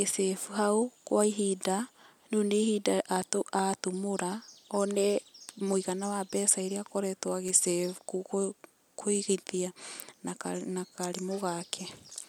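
Repeated buffers at 5.42 s, just before "muigana wa mbeca iria", at 7.48 s after "wa mbeca iria akoretwo", and at 10.72 s: the device replayed a 5.33 ms block, consistent with a 256-sample buffer, when fresh audio arrived late. Each is a sharp click, with the 7.48 s one repeating three extra times to give a brief buzz.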